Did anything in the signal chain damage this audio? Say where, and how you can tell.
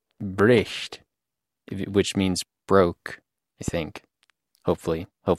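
Yes. A voltage step, likely from a plug, switch or static in the analogue wiring, entered the chain. It is heard as a loud pop, doubled from 0.40 to 0.61 s and single at 3.68–3.70 s after "which means broke I", about 10 dB above the speech.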